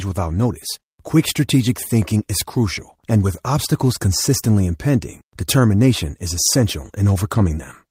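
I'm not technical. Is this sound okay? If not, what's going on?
Yes, it's fine: nothing in this recording stands out as a problem, so you can relax about it.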